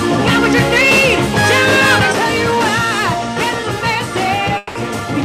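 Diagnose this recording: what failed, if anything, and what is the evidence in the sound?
Network stage, most likely a long network dropout. From about 4.57 s to 4.77 s the sound stops being real and turns into a smeared continuation of whatever came just before, a buzzy tail that thins out over roughly 180 ms instead of dropping to silence. That's the receiver papering over a gap where no packets showed up, stretching the last good audio. When the audio resumes at 4.77 s, that stretch is simply gone.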